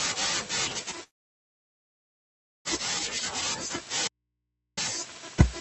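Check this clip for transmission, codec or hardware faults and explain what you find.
Two real faults here, both in this speech clip that's been through a call-style codec with the top end cut off around 8 kHz.

From 1.03 to 2.68 s there's a long network dropout, likely a run of lost packets. The receiver carries the last sound on as a fading buzz, then it's basically silence for about 1.6 s before speech picks up again, with that whole stretch simply gone.

From 4.08 to 4.77 s you get an audio dropout to a faint residue. The signal cuts out abruptly for about 0.7 s and leaves just hum, about 55 dB below normal level. That points to the input likely losing its source while the rest of the chain stayed live.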